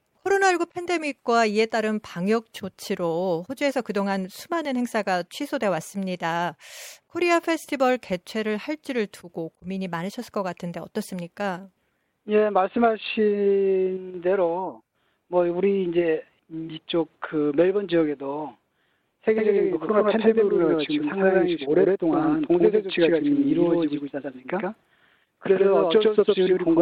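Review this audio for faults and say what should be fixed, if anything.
A doubled audio track starts abruptly at 19.36 s and runs to the end. A second full-band copy trails by roughly a tenth of a second, at about the same level, with no decay. Likely cause: a slower capture path recording the same signal again. Prevent it by monitoring only one input path and muting duplicate routes before recording.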